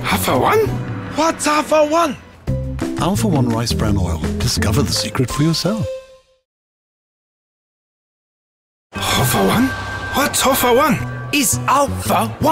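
No technical faults are audible.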